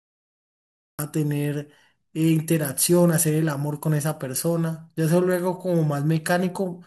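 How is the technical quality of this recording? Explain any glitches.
The recording has one clear glitch, a cut-off start. From 0.0 to 0.99 s there is only digital silence. At 0.99 s the speech begins abruptly, mid-sound. Capture started late, so the opening was never recorded. There is no natural attack or fade-in.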